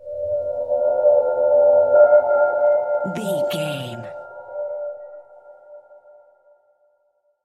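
From 2.24 to 3.29 s a gain change drops the level by about 10 dB in coarse unsmoothed steps, roughly twenty a second, and from 4.9 to 6.11 s it climbs back about 10 dB at around fifteen steps a second. Each jump clicks, giving audible zipper noise.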